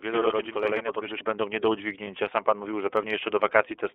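Speech, carried throughout by the iLBC codec. The sound is confined to a telephone band of roughly 300 Hz to 3.5 kHz and has a slightly rough, synthetic edge. The coding damage is plainly audible. Because the excitation is rebuilt frame by frame, the roughness sounds like grainy, buzzy texture, not the clean dullness of simple low-pass filtering. The frame structure fits iLBC's 13.33 kbps mode with 30 ms frames. From the start to 1.21 s there is a channel delay (doubling): one channel runs about 93 ms behind the other, which fits a 4096-sample buffer, and the two are summed to mono. The late copy arrives at the same level as a distinct slap. Reverb would spread into a decaying tail, and a short delay would give hollow comb colouring, but here the doubling stops cleanly just before "będą nie do". Right after "będą nie do", from 2.04 to 2.08 s, lost iLBC frames leave a brief held, slightly buzzy vowel-like sound. 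This is the decoder repeating the last pitch cycle mixed with noise over a gap that fits a single 30 ms frame. It is a sustained buzz, not a click or a hole of silence, and the speech is intact again almost at once because each iLBC frame decodes independently.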